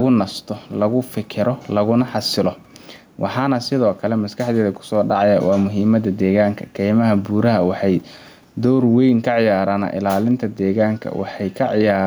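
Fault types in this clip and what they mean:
Gain pumping, throughout the clip: the gain swings by roughly 5 dB, with the background about 42 dB below the speech, likely from far too much input gain with a fast limiter pulling each peak down, squashing the speech.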